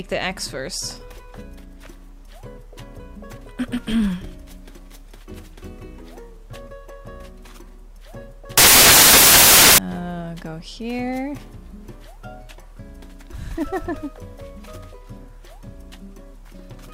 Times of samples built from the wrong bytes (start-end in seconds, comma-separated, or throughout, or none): 8.57-9.78